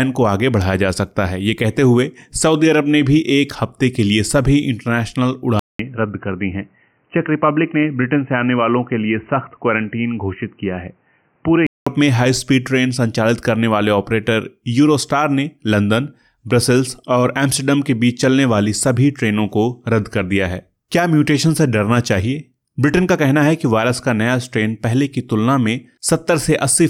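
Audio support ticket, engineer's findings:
Input likely switched to a poorer device, 5.59–11.87 s: 200 ms dropout at the switch, then speech cut off above 3 kHz, dull and boxy, with a faint new noise floor well below it. Level roughly unchanged. Full band back at 11.87 s.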